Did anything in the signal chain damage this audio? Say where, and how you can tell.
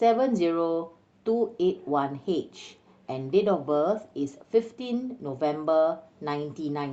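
Yes: a call bitrate drop at 3.59–4.78 s. The network's bandwidth estimate fell, and the Opus encoder went from 64 to 25 kbps, coding the speech coarsely and leaving it rough and watery.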